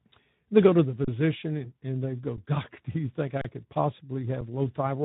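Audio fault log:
throughout: Speex codec. The speech has a hoarse, noisy texture, because at about 11 kbps this CELP coder has few bits for the excitation. Whatever sits above 4 kHz comes out as a shaped, noise-like fill rather than real detail.
1.05–1.08 s, 2.37 s, 3.41–3.45 s, 4.41 s: underrun with held sample. The output buffer ran dry after "go to the", "and they go" and "do you think", and once more at 4.41 s. The waveform freezes flat at its last value for 32, 11, 32 and 6 ms, which fits a 512-sample buffer for the second gap. No audio is lost, so playback resumes where it stopped with only a soft edge.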